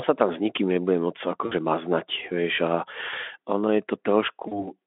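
Speech passed through a narrow Speex line shows VoIP packet loss concealed by the speech codec at 1.45–1.53 s and 4.47–4.72 s, about 60 ms and 40 ms of lost audio. Unlike a silent dropout, each gap becomes a fading, extrapolated buzzy tone or coloured noise.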